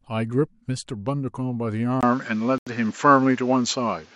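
At 2.01 s the speech goes dull after a brief silence of about 20 ms. Nothing remains above 7.6 kHz, the level shifts by a few decibels, and new background noise appears. This is likely an input switched to a poorer device. At 2.58 s the sound drops out for 84 ms, then resumes, likely a Bluetooth stall from delayed packets.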